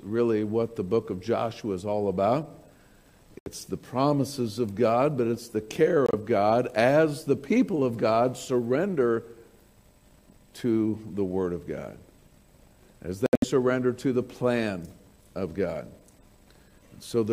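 At 3.39, 6.06 and 13.26 s the sound drops abruptly into silence for about 0.09, 0.09 and 0.18 s. These are corrupt frames muted: the decoder rejected damaged compressed frames and silence replaced them. The gap lengths point to roughly three, three and seven frames. On a waveform each shows as a flat near-silent line with sharp edges, and on a spectrogram as a clean vertical blank band.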